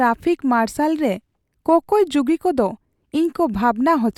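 No technical faults are audible in this recording.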